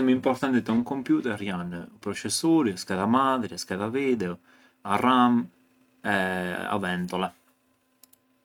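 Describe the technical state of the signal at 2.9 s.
At 2.9 s the speech signal is intact, with no audible technical fault at that moment.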